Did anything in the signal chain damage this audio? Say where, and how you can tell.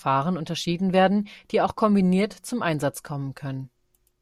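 No, nothing in the signal chain has damaged this speech recording. No stage from capture through to playback leaves any audible trace on it.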